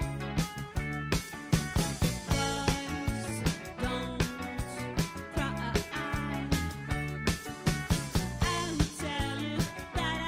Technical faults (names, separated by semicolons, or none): none